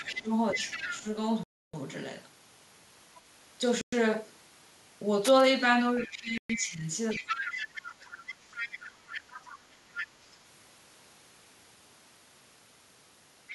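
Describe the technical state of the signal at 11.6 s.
At 11.6 s the speech signal is intact, with no audible technical fault at that point.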